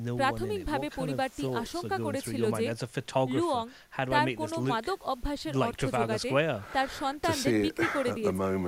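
A speech recording, and nothing is technically wrong with it.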